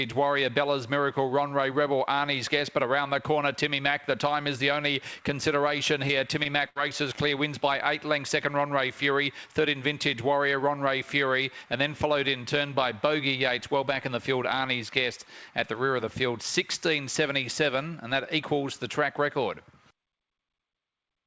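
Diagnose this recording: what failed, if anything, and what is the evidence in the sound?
Short concealed packet loss at 6.08, 6.43 and 7.15 s, a network fault: each time a few hundredths of a second failed to arrive, and the receiver bridged the hole by extending the preceding sound, leaving a brief smear or wobble before blending back.

Burst of packet loss from 6.69 to 6.77 s, also on the network side: consecutive packets went missing, roughly 60 ms in all, so the last sound is stretched and faded before the audio resumes further along, skipping the portion in between. The call path's band limit, with nothing above 8 kHz, points to G.722.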